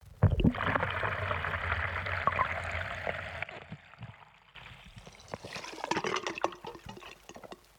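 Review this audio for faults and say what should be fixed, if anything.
Sudden gain jump, 3.44 to 4.55 s: the sound and its background noise drop together by about 12 dB between one sample and the next, then jump back up at 4.55 s, most likely from a gain setting applied with no ramp. Applying every gain change through a short fade would prevent it.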